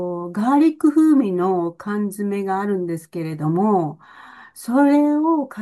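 The speech signal carries no audible technical faults at any point.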